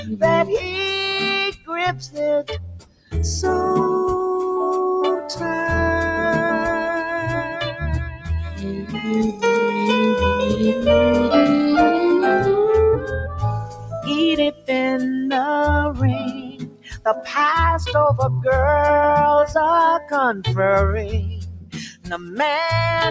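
A noise suppressor meant for speech has been applied to non-speech sound, mistaking held tones, ambience and decaying tails for noise. The level swings by around 10 dB as attacks pass while sustained parts sink. On a waveform the envelope pumps, and on a spectrogram, which shows nothing above 8 kHz from the call microphone processing, tails end abruptly. The sound is cut by the noise suppressor hardest at 0.00–0.76 s (about 11 dB), 1.51–3.14 s (about 20 dB), 7.52–9.43 s (about 14 dB), 12.97–14.70 s (about 19 dB), 15.92–17.34 s (about 20 dB), 19.99–20.45 s (about 10 dB) and 21.37–22.39 s (about 20 dB). These stretches appear as hollowed, darkened bands where the steady content should continue.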